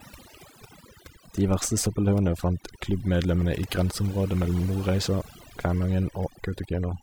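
Overdone noise removal runs through the whole speech clip. A noise reduction stage was pushed too hard, so any frequency band sitting close to its noise estimate is pulled far down or switched off, and the softer parts of the voice fall below that line along with the background noise. Between phrases the background drops to near silence scattered with twinkling specks.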